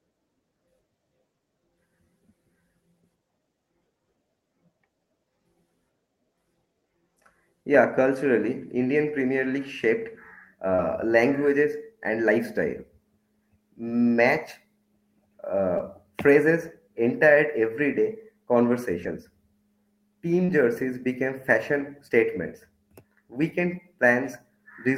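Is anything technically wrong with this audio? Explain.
Yes, the speech has two kinds of packet-loss damage.

Lost packet rebuilt from error correction appears at 8.81, 10.78, 15.79, 20.48 and 21.80 s (about 20 ms each) and across 19.03 to 19.13 s (60 ms). The next packet carried a low-bitrate copy, so nothing drops out. Unlike concealment, the sound is the real sound, only coarser and noisier.

Short concealed packet loss occurs at 10.75 to 10.80, 15.78 to 15.81 and 20.45 to 20.50 s. With no copy available in time, the decoder stretched the preceding sound to cover the hole before fading back into the real audio. It is heard as a brief smear or wobble rather than a rough patch.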